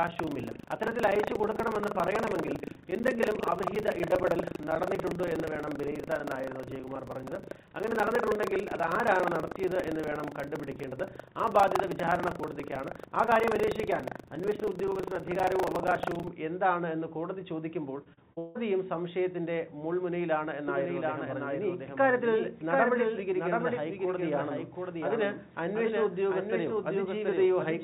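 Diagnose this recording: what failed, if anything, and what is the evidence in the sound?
Driver or buffer stage: the program writing the ring buffer and the hardware reading it have slipped and cross inside every period, producing buffer tearing from 0.0 to 16.29 s. Roughly a fifth of each buffer replays audio from about 150 ms earlier, joined hard on both sides. The result is a 25 Hz rattle riding on the signal.

Network stage: repeated packet loss between 18.04 and 18.57 s. Four gaps arrive in quick succession, the longest 164 ms. Nearly half of that span is patched by extending the preceding sound, so the audio turns choppy and robotic, with pieces audibly missing.

Capture or editing stage: a doubled audio track runs from 20.68 s to the end. A full-band copy, about 5 dB quieter, trails by roughly 0.7 s with no decay or room colour, and it starts abruptly. The likely cause is a slower second capture path mixed back in.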